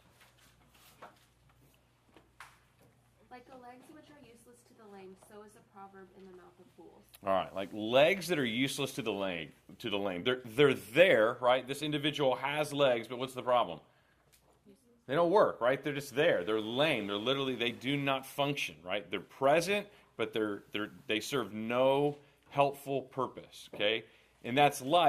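Nothing stood out as a technical problem on listening to this audio.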